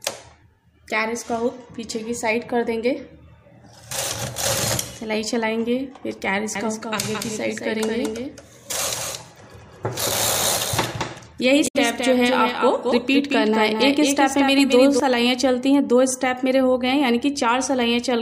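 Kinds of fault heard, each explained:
Doubled audio track: From 6.55 to 15.0 s, a second copy trails by about a fifth of a second, roughly 5 dB quieter. A slower capture path is the likely cause.
Damaged data in a compressed stream: Corrupt frames from 11.64 to 11.76 s make the decoder lose sync and search for the next header, producing a brief glitch.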